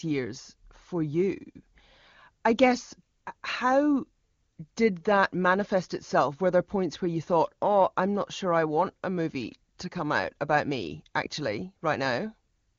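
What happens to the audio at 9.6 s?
At 9.6 s the speech is intact and carries on cleanly, with no dropout, glitch or other fault, just the steady wideband HD Voice sound whose content stops at about 7.1 kHz.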